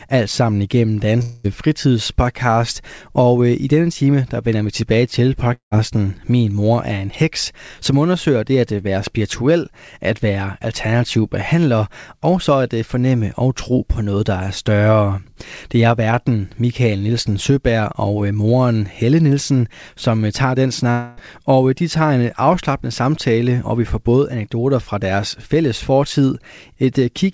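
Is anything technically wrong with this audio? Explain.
Yes. The speech has three gaps that sound like long network dropouts. They occur at 1.22 to 1.46 s after "alt sammen igennem", at 5.54 to 5.73 s after "vender vi tilbage til", and at 20.91 to 21.19 s, between "som tager den" and "og de tager en". Each is likely caused by a run of audio packets failing to arrive. The receiver stretches the last sound into a fading buzz to cover the hole. About 220 ms, 180 ms and 260 ms of speech are lost, and the second gap decays into roughly 120 ms of silence before the speech resumes. The band stops at 8 kHz, which fits a wideband call codec such as G.722.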